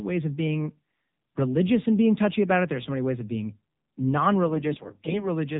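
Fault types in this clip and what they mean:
AMR narrowband mobile codec, throughout: The speech is squeezed into the mobile-phone band, so nothing above 4 kHz survives and sibilants sound dull and boxed-in. The codec rebuilds the voice from a vocal-tract filter excited by a handful of pulses per short subframe. At this low rate, which fits the 7.4 kbps mode, those pulses are too sparse, giving a plainly audible buzzy, synthetic edge.
AMR bit errors, 4.44 to 5.30 s: Near the end, the voice turns hoarse, scratchy and gargly for almost a second while keeping roughly the same pitch and loudness. Flipped bits in the weakly protected part of each frame slipped past the checksum that guards only the essential parameters. The excitation pulses land in wrong positions and fine gain and spectral detail drift. The damage suggests an error rate of around one bit in twenty across most frames in that stretch.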